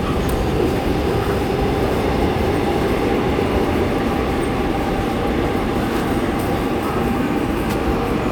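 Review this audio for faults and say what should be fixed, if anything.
No faults found; nothing here needs fixing.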